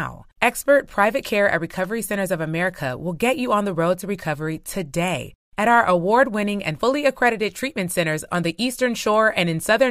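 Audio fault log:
No technical faults can be heard in the speech recording. There is nothing here to log.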